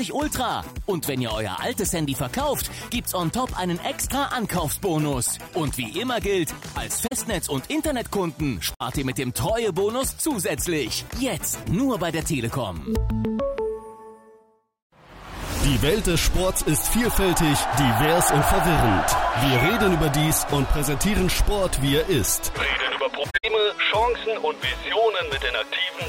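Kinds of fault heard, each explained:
Corrupt frame concealed: damaged AAC frames got caught by the decoder and papered over around 7.07–7.13 s, 8.75–8.82 s and 23.30–23.45 s. The last one is longest, about 150 ms, which suggests several consecutive frames were hit.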